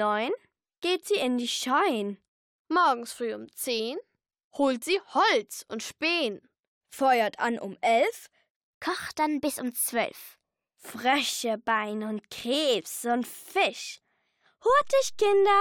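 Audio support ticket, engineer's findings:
DC step at 14.70 s, offset holding through end of clip. Probable component: converter recalibration or offset input switched into path. Zero line jumps by about -37 dBFS. Audible as single low thump at onset; programme sound continues unchanged above shifted baseline.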